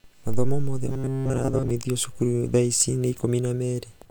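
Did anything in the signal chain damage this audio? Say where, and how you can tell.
Yes. Computer activity noise enters the analogue wiring through a shared ground, leaving a faint buzz near 300 Hz, about 45 dB under the speech, throughout.

From 0.87 to 1.71 s, robotic sound from repeated short buffers: a starved driver buffer likely looped chunks of about 7.5 ms, imposing a metallic 133 Hz buzz.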